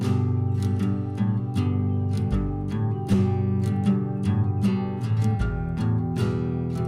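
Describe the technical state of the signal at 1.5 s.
Nothing at 1.5 s disturbs the signal: no dropout, distortion or other audible fault occurs at that moment.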